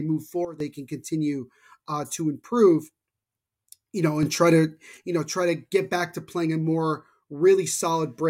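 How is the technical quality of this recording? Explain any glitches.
Two sudden gain jumps break up this speech recording. The likely cause is a gain setting applied instantly, with no ramp, so the level switches from one sample to the next. From 0.45 to 0.60 s, just before "can continue uh to", everything drops by about 12 dB, then snaps back. From 4.23 to 4.97 s, just before "you know try to", it rises by about 6 dB. Each time, the voice and the background noise step together, so the change is abrupt rather than a natural shift in loudness.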